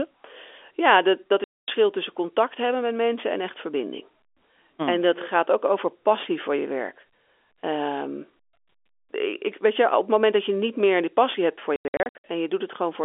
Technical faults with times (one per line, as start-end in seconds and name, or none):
1.44-1.68 packet loss filled with silence
11.76-12.24 packet loss filled with silence